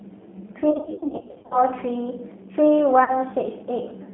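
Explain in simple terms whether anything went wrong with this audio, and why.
The speech sounds thin, rough and slightly robotic throughout. That comes from the G.729 codec. It rebuilds speech from a simplified model and drops everything above 3.5 kHz.

Between 0.71 and 1.58 s, many small packets went missing. VoIP packet loss was concealed by the speech codec, which stretched the last sound into a fading buzzy tone or coloured noise. A shorter gap follows at 3.04 to 3.22 s.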